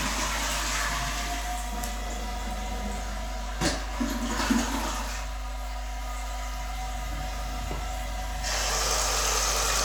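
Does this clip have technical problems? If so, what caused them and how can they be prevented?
Yes. Mains hum runs throughout, a steady 50 Hz tone with low harmonics, roughly as loud as the sound itself. A ground loop or nearby transformer is coupling the power line into the signal path. To prevent it, break ground loops with isolation or balanced connections and keep cables away from transformers.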